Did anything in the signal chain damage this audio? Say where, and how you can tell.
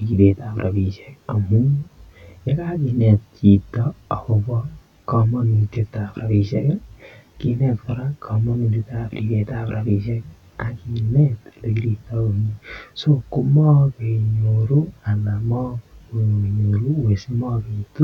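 Yes. Channel delay (comb filtering) runs through the whole speech clip. One channel arrives around 20 ms late, which points to a mismatched buffer at the driver or buffer stage, and the two channels are then summed to mono. Whatever the channels share cancels at evenly spaced frequencies, starting at roughly 30 Hz, so fixed notches run up the spectrum and the sound stays rough and slightly doubled from start to finish.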